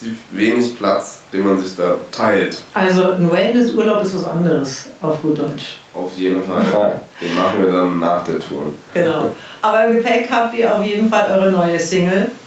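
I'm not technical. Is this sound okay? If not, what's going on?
No, not quite. All the way through there's gain pumping: loud and soft parts are pushed closer together in level and the sound is squashed, likely from the level being set too hot.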